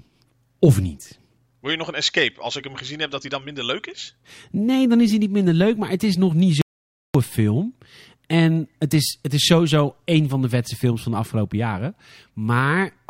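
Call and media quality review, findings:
Audio dropout to silence, 6.62–7.15 s, right after "het is nog niet": speech cuts to silence for about 0.53 s, no room tone. Likely input lost upstream, mic link or mute.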